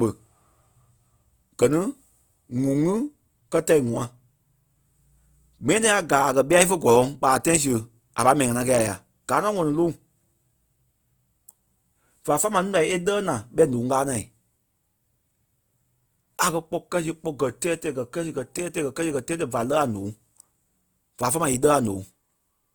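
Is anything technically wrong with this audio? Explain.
Yes. Throughout, the speech shows likely Opus compression at a rate fitting about 24 kbps. Band energy is kept but refilled with noise, so the fullband sound turns grainy and rough.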